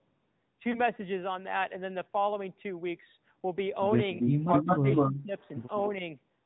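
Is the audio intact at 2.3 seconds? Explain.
No. At 2.3 seconds, as throughout the clip, the speech sounds muffled, buzzy and synthetic, with nothing above 4 kHz. This is AMR narrowband mobile codec damage: at 10.2 kbps, the 8 kHz vocal-tract model rebuilds speech from only a few pulses.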